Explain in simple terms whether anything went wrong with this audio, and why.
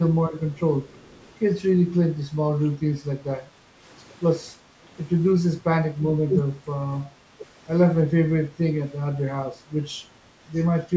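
Three kinds of call-processing fault appear in this speech.

Speech suppressed in double talk: the voice briefly dips or thins at 0.56 to 0.66 s, 3.41 to 3.45 s, 6.27 to 6.32 s and 7.38 to 7.42 s, each lasting 40 to 100 ms. The likely cause is an echo canceller mistaking overlapping talk for echo and turning it down.

Echo leak: from 0.88 to 1.31 s a faint, delayed copy of the voice trails about a third of a second behind. It is most likely loudspeaker sound that the echo canceller at the far end failed to remove fully and sent back.

Background gated by the echo canceller: the room sound drops slightly for a moment at 3.73 to 3.79 s and again at 4.6 to 4.74 s. The canceller clamped down on the microphone while the loudspeaker played, then released it.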